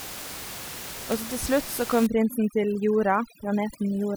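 Speech, with overdone noise removal from 2.07 s to the end at 4.16 s. A noise reducer set too strong shuts off bands near its noise estimate. Quiet parts of the voice vanish with them. The background drops and breaks up into twinkling specks. Before 2.07 s, room noise sits about 12 dB below the speech.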